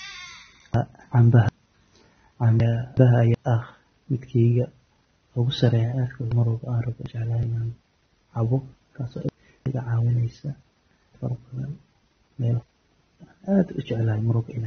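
The whole clip is dull and smeared, with nothing above about 6.3 kHz and a fizzy, warbling edge on sibilants and held sounds. That's the signature of AAC compression, likely AAC-LC squeezed to a low bitrate around 24 kbps. The encoder drops the top of the spectrum and coarsely quantises what's left, so detail blurs and noisy bands swim around. The damage is plainly audible from start to finish.

On top of that, chunks out of order jumble the speech five times. The chunks run about 0.37 s. From 0.74 to 1.49 s, 2.60 to 3.34 s and 8.92 to 9.66 s, one chunk plays a chunk late. From 6.32 to 7.43 s the displaced chunk is two late, and from 11.15 to 12.63 s it's three late. Nothing goes missing, but each swap leaves hard joins, and the sound briefly turns garbled.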